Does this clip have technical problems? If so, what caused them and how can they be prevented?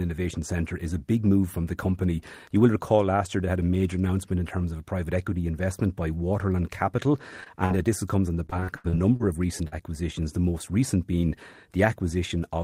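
Yes. At 7.40 to 7.48 s, at 7.66 to 7.72 s just before "uh this comes on", and at 9.68 to 9.74 s between "of recent" and "the most recent being", the speech briefly smears or wobbles. This is short concealed packet loss. Roughly 40 ms of audio (two back-to-back 20 ms holes in the first case) never arrived in time, and the receiver bridged each hole by extending the preceding sound. More jitter-buffer depth or forward error correction on the link would prevent it.

From 8.46 to 9.22 s, between "this comes on the" and "of recent", the speech turns choppy, with pieces dropping out. This is repeated packet loss. Seven separate holes, the longest about 82 ms, came in quick succession, and the receiver synthesised about 240 ms of replacement sound, roughly 31% of that stretch. A more stable network path, with redundancy or forward error correction enabled, would prevent this.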